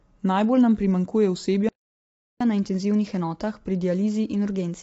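Speech runs rough and grainy from start to finish, with a noisy fill between the harmonics and nothing at all above 7.8 kHz, so the top of the voice sounds dull and artificial. The likely cause is low-delay AAC compression of the AAC-ELD kind used for video calls, at a rate that fits something around 24 kbps. That codec works on short low-delay frames, and at that budget it cannot spend enough bits on each frequency line, so gaps between harmonics fill with coding noise and the highest band is dropped. Right after "nam primanjkuje", the sound cuts out mid-flow at 1.69 s and stays silent until 2.41 s, a gap of about 0.72 s. That is a playback stall, where the player likely starved of data or had its thread blocked, so output stopped until it could resume. From 2.41 s to the end of the clip the speech comes back faster and higher, at 1.1 times normal speed with the pitch raised by roughly one and a half semitones. 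This is catch-up at higher speed. The player is resampling its built-up backlog to win back the time lost in the stall, and here it has not returned to normal speed by the time the clip ends.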